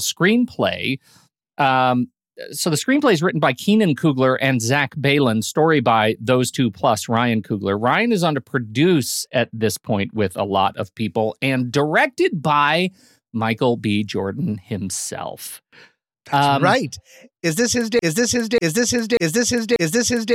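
A speech recording that, from 17.99 s to its end at 20.35 s, turns into a broken-record loop: the same 0.59 s fragment plays back to back four times, stuttering mechanically. The likely cause is a stalled player or stream repeating its last buffered piece, so the audio meant for those final seconds is lost.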